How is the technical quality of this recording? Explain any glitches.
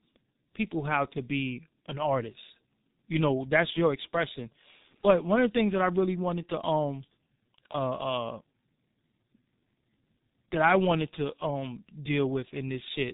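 The quality is poor throughout: the whole speech recording has passed through a G.723.1 codec with heavy damage. Nothing above 3.8 kHz survives, and the sparse, slowly updated voice model leaves speech muffled and hoarse, with smeared consonants, which fits a rate near 6.3 kbit/s. Unlike a simple low-pass filter, the voice also sounds rough and hoarse, not merely dull.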